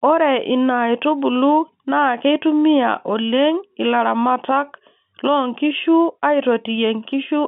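No technical faults occur anywhere in this speech recording.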